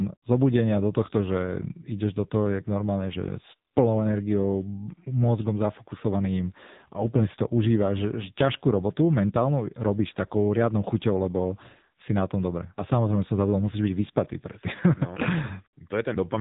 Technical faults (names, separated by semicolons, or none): AMR narrowband mobile codec